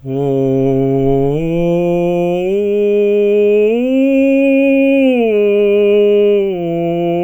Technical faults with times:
none

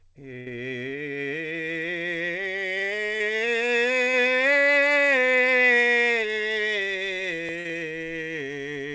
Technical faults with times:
0.40-0.48 burst of packet loss
3.18-3.22 short concealed packet loss
4.12-4.15 short concealed packet loss
7.59-7.67 burst of packet loss

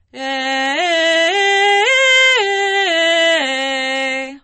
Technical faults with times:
0.00-4.43 low-bitrate audio saved at a high bitrate

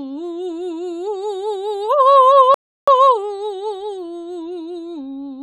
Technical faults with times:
2.54-2.87 rebuffering stall

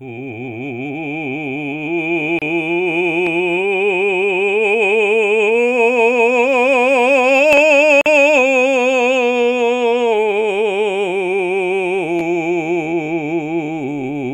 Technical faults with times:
2.39-2.42 gap at a join of encoded pieces
8.01-8.06 gap at a join of encoded pieces

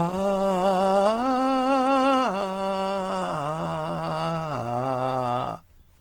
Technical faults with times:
0.00-6.01 Opus compression

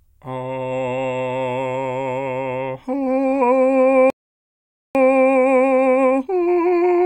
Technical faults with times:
4.10-4.95 playback stall
4.95-7.06 time-compressed catch-up

